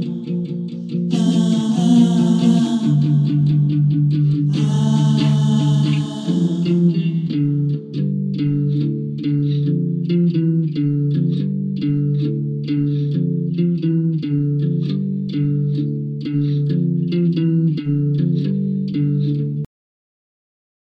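At 19.65 s the audio stops mid-sound in a cut-off end: the final buffers were never written, so the signal drops straight to digital silence without any decay. The waveform ends in a vertical edge followed by a flat line, and the spectrogram goes abruptly black.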